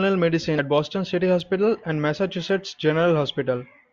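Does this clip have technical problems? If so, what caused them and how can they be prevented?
Yes. At 0.58 s compressed frames are skipped: about three 21.3 ms frames, roughly 70 ms of speech, drop out, so the audio jumps ahead, which shows as a vertical line on the spectrogram and a waveform discontinuity. Check file integrity and use error-protected transmission so damaged frames are not discarded.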